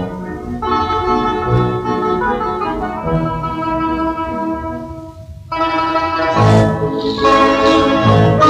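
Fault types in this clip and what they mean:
Nothing here calls for a label, as there's no dropout, glitch or damage to point to anywhere in the audio.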